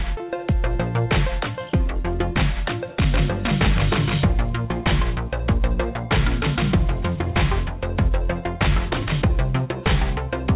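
No faults can be heard: the audio comes through a call path that sounds like narrowband G.711 mu-law, with nothing above 4 kHz, and the signal holds steady throughout with no gaps, level jumps or timing disturbances.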